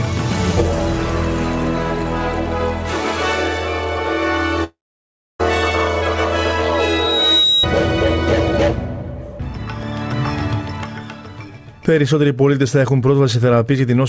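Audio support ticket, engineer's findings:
Long network dropout, 4.64 to 5.41 s. Audio stops for about 0.76 s. Last sound smeared into a fading buzz, then about 0.64 s of silence. Resumes with that stretch missing. Likely packet loss on the call path, receiver concealment running out.

Loudspeaker feedback squeal, 6.74 to 7.67 s. Single 3.8 kHz tone swelling over roughly 0.7 s, peaking about 5 dB above the signal. Mic picking up its own speaker; loop gain above one at that frequency. Sits inside the G.722 band, which stops at 8 kHz.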